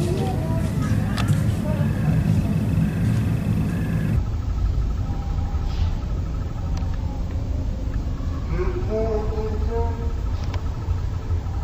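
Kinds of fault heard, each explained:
stereo read as mono: interleaved left and right samples are taken as one channel, so from 4.16 s the audio plays at half speed, an octave low.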